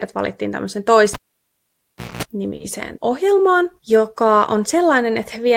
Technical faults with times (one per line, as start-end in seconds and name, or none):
1.13-2.23 cable pulled and plugged in
1.67-1.72 short stall from a late packet
2.05-2.11 short stall from a late packet
2.56-2.63 short stall from a late packet